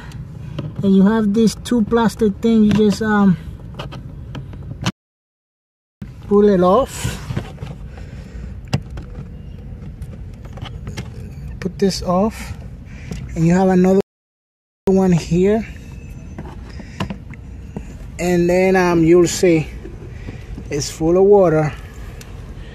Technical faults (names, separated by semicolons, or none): rebuffering stall